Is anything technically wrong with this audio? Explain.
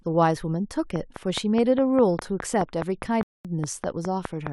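Yes, there are two faults. From 0.96 to 4.48 s, a train of clicks ticks steadily at about 4.9 per second, around fifteen sharp pops standing well above the speech, likely from electrical interference or a faulty connection. At 3.23 s the speech drops to silence for 0.22 s, then resumes exactly where it stopped: a rebuffering stall, where the player ran out of downloaded audio and waited.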